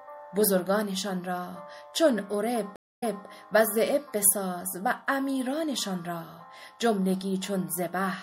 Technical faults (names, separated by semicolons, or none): MP3 compression; stream reconnect